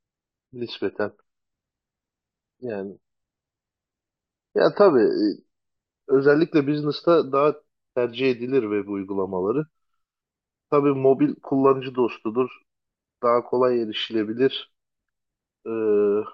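Speech, opening at reduced quality. From 0.0 to 6.0 s the treble is thin or sounds synthetic, and codec artefacts are strong. The sound fits a low-bitrate AAC stream around 32 kbit/s. At 6.0 s the quality jumps up with no gap, consistent with a step to roughly 96 kbit/s. This is an adaptive stream starting at a low bitrate. The player began on a cheap version to start fast, then switched once it had measured the connection.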